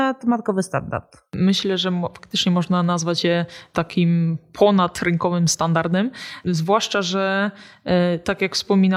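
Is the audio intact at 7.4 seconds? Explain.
Yes, the speech at 7.4 s plays through intact, with no dropout, click or other fault at that moment.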